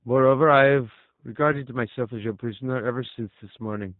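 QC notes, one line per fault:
throughout: G.729 codec. The speech is band-limited with nothing above 4 kHz, and it has a plainly audible rough, slightly synthetic texture. The coder rebuilds each 10 ms frame from a vocal tract filter, a pitch predictor and a sparse set of fixed pulses rather than the actual waveform, so fine detail is lost. This fits G.729A at 8 kbit/s.
1.53 to 1.62 s: VoIP packet loss concealed by the speech codec. A brief gap in the incoming stream, which fits a single lost 10 ms frame, was filled by the decoder repeating its last pitch and filter settings at reduced gain. Because each frame's prediction depends on the previous one, the speech stays weak or distorted for roughly 90 ms before the decoder settles again.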